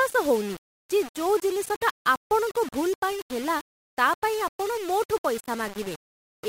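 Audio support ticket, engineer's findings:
Low bit depth without dither, throughout. Grainy distortion tracking the speech, gritty on quiet syllables, decays sputtering or dropping to silence. Likely 5-bit rounding, error near 20 dB below signal. Unlike dithered requantisation's steady hiss, grit stops with the signal.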